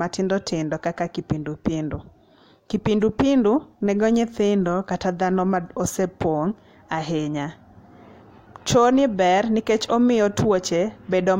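Nothing stood out on listening to this speech recording.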